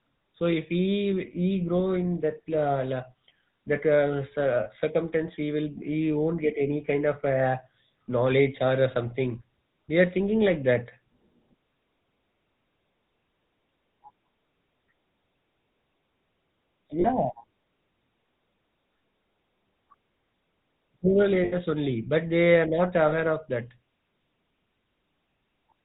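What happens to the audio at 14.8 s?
At 14.8 s the speech carries the same GSM full-rate codec damage present across the whole clip. The coder models the vocal tract and drives it with sparse, regularly spaced excitation pulses, consistent with a 13 kbit/s stream, discarding everything above 4 kHz and leaving a plainly audible buzzy, gravelly roughness.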